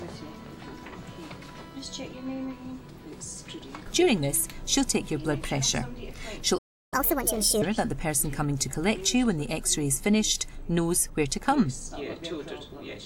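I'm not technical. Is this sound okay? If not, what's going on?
No. The player most likely ran short of incoming data, or was held up for a moment, and this is a playback stall: it had nothing to send out, so the output went silent from 6.58 to 6.94 s, a gap of about a third of a second. To you it sounds like the sound freezes in mid-flow and simply stops, then picks up again once the player has recovered.

Right after that gap, from 6.94 to 7.62 s, the player tries to win back the lost time with catch-up at higher speed. It runs its waiting backlog through at 1.5 times normal speed, which also lifts the pitch by a noticeable amount, somewhere around seven semitones. So for well under a second the sound rushes and goes squeaky-high, then settles back to normal speed and pitch.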